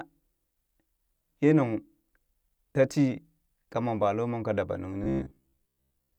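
Right after "kamon baloomon ka dabanung", from about 5.04 s to 6.18 s, the speech turns into robotic sound from repeated short buffers. It's a stiff, metallic buzz at about 66.7 Hz. That points to roughly 15 ms slices looping over most of the stretch, likely because fresh audio kept arriving late.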